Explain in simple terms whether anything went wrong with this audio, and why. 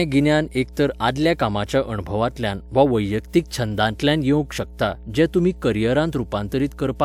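A steady 60 Hz mains hum runs beneath the speech from start to finish, well below the voice, likely from a ground loop. Unlike hiss or rumble, it is one unchanging pitch.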